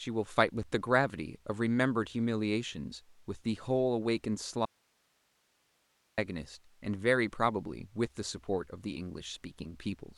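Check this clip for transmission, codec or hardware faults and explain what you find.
There is one fault in this speech clip, an audio dropout to a faint residue from 4.65 s to 6.18 s. For about 1.5 s the speech vanishes abruptly, leaving only hiss roughly 40 dB below the signal, and then returns just as suddenly. The likely cause is a break in the signal feed while the downstream path stayed live, passing its own noise floor. On a waveform the envelope collapses to a thin band with hard edges. A spectrogram shows harmonics cut off sharply and replaced by faint, even broadband noise until the speech resumes.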